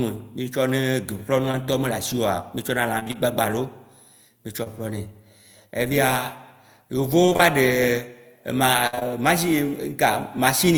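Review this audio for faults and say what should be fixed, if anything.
At 1.51 s and again at 4.63 s the speech briefly smears, a wobble lasting a few hundredths of a second. This is short concealed packet loss. Roughly 20 ms of audio failed to arrive in time each time, which fits a single lost packet. The decoder bridged each hole by extending the sound just before it, then cross-faded back into the real signal.

Three stretches turn choppy: 2.99 to 3.15 s, 7.26 to 7.41 s, and 8.87 to 9.12 s. This is repeated packet loss, the robotic sound. In each stretch four separate holes arrive in quick succession. The first two lose about 80 ms in total, with gaps up to 27 ms, and roughly half of each span is synthetic fill. The last is worst: about 120 ms lost, one gap of 55 ms, and close to 60 percent concealed. Patch follows patch, so the sound turns choppy and drops fragments.

To prevent both, fix the network path's loss and late arrival, for example with a larger adaptive jitter buffer, forward error correction or redundancy, and QoS priority for the audio stream.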